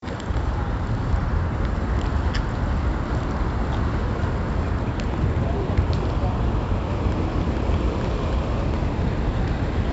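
Throughout, 4-bit ADPCM compression, fitting a 64 kbps stream, quantises every sample coarsely, leaving heavy gritty hiss on loud sound and nothing above 7.7 kHz.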